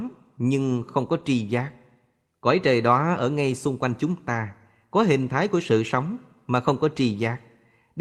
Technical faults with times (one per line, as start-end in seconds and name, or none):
1.19-1.21 lost packet rebuilt from error correction
3.13-3.19 lost packet rebuilt from error correction